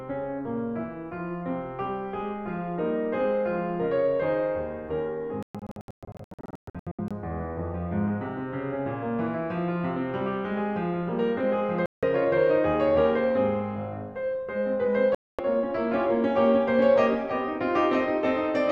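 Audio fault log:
5.43 to 15.39 s, digital broadcast dropout: the receiver loses good frames and mutes until they return. From 5.43 to 7.11 s, about a second of music vanishes in scattered holes, the longest 120 ms. At 11.86 and 15.15 s there are single gaps of 168 and 240 ms.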